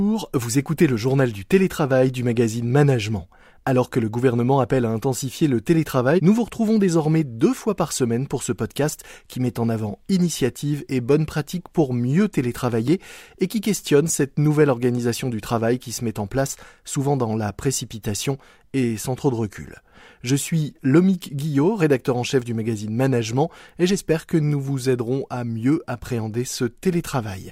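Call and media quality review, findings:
Block of digital silence at 12.88 s, between "bonnes pratiques pour mieux" and "et qui questionne cette": a single tick, about 1.3 ms dropout. Fits one missed 64-sample buffer at 48 kHz. Unlike a packet-loss gap, no hole or concealment smear, just abrupt edges.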